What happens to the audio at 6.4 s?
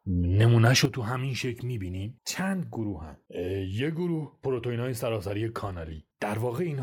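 At 6.4 s the speech is still sitting in the drop from a sudden gain jump that hit at 0.85 s: everything, background noise included, fell by about 10 dB at once and stays down to the end. It's likely a gain setting applied without a ramp.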